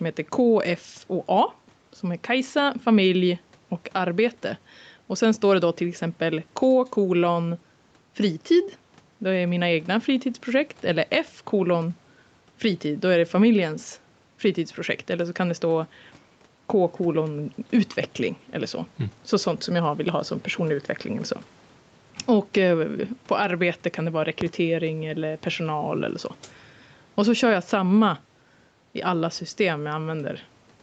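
Right from the start and all the way through, there's gain pumping, with the level swinging by something like 10 dB. The likely cause is input gain set way too hot for the mic, with a fast limiter or compressor clamping down on every loud syllable. That squashes the speech and keeps loud and quiet parts unnaturally close.

Then at 24.41 to 24.45 s, right after "arbete kan det vara", there's a single loud pop, roughly 15 dB above the speech. It's a sharp, short thump sitting on top of the audio, and the speech carries straight on underneath it. The likely cause is a sudden voltage jolt, from a plug, a switch, static or a driver hiccup, that the downstream circuitry shaped into that brief click. Through the call path the top end stops around 8 kHz, which fits Opus at about 48 kbps.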